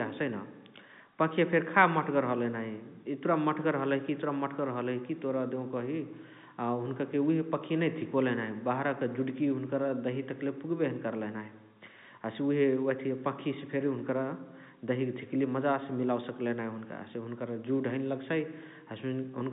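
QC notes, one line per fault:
No faults found.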